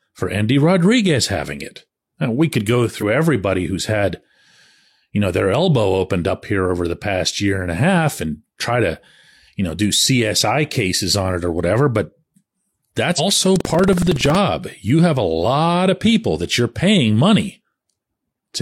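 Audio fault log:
2.98–3.03 s and 13.15–13.20 s: damaged data in a compressed stream. Each event is a short disturbance about 60 ms long. Corrupted bytes made the decoder misread those frames, lose sync and skip forward to the next valid frame header.
13.51–14.35 s: buffer tearing. A robotic buzz at 21.5 Hz sits on the speech, which fits a 2048-sample buffer. Writer and reader positions are crossing inside each period, so a small slice of every buffer replays audio roughly 150 ms old, with hard joins on both sides.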